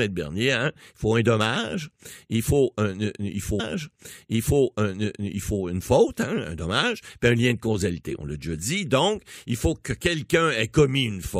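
At 3.59 s, right after "dommage il faut il", a stream segment repeated: the player queued the same chunk twice, so about 2.0 s of speech replays until 5.59 s, then "une faute" follows. A small blip marks the jump back. Unlike a stutter, it's a long, clean repeat.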